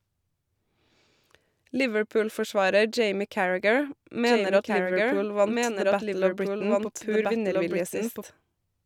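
From 4.26 s to 8.22 s the speech carries a doubled audio track. A second full-band copy runs about one and a half seconds behind, a few decibels quieter. It is dry, with no room colour, and cuts in and out abruptly, likely from a duplicated capture path.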